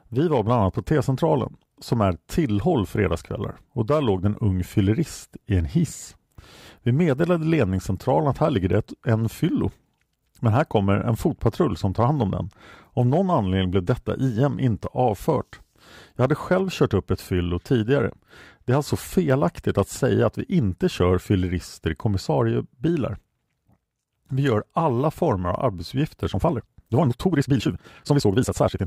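Speech clip, and the last stretch from 26.29 s to the end at 28.86 s is a time-stretched section: the pace suddenly jumps to about 1.79 times normal while pitch holds, so it sounds rushed, likely from software squeezing it to fit by dropping short slices.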